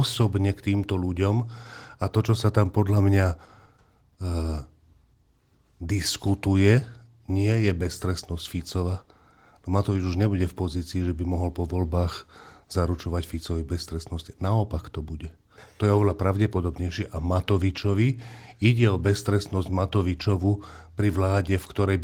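No faults can be heard anywhere in this recording.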